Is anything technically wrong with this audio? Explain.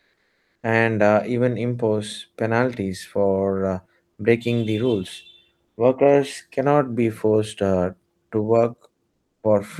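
Yes, there are two related problems, both pointing to a sender that stops transmitting during pauses.

Comfort noise in place of the background shows up twice. From 0.00 to 0.55 s, just before "and uh even impose", and again from 9.13 to 9.43 s, the real room background disappears and a smooth, detail-free hiss takes over. The background is already very low, about 50 dB and about 55 dB under the loudest parts. The fill is about 2 dB quieter in the first spot and about 8 dB quieter in the second. This is likely discontinuous transmission, as in Opus DTX: the sender goes quiet when it hears no speech, and the receiver synthesises rough noise to cover the gap.

There's also an onset clipped by the voice detector at 9.40 to 9.43 s, right where that second comfort-noise stretch ends. About 30 ms of the start of the sound is missing. The sound comes in abruptly, with no soft lead-in, likely because the detector was a beat slow to notice the sound had resumed. 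Those first milliseconds never got sent, and the receiver played comfort noise over them instead.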